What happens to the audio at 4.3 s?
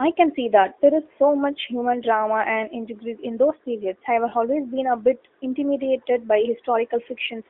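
At 4.30 to 4.34 s there is a lost AMR speech frame, consistent with a single 20 ms frame failing its checksum. The decoder repeats the previous pitch and vocal tract settings at reduced gain, so you hear a brief dip or warble rather than the hard silent gap of a plain dropout.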